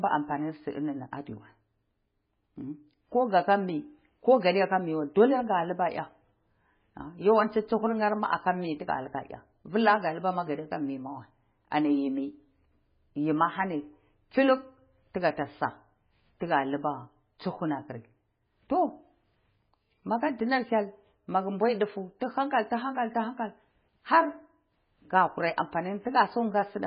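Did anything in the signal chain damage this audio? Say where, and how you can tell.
Yes, at the codec stage, throughout this speech clip: nothing survives above 5.1 kHz, and the remaining band sounds watery and swirling, with smeared onsets. This is likely heavy MP3 compression at a very low bitrate around 16 kbps. A simple low-pass filter would cut the treble cleanly, but here weak frequency lines flicker on and off between frames.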